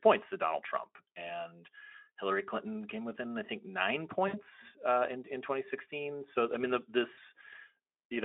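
Right after "within I think nine", around 4.27 to 4.43 s, there's VoIP packet loss concealed by the speech codec: about 60 ms of audio goes missing, and the decoder stretches the last sound into a fading buzzy tone or coloured noise before "uh in in". Again at 7.13 to 7.19 s, after "I mean the", roughly 40 ms drops out the same way.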